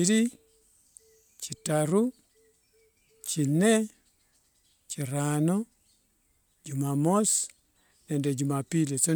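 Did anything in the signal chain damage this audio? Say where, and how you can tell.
No, nothing in the signal chain has audibly damaged this speech recording. No stage, from capture through to playback, leaves a mark that can be heard at any point in the audio.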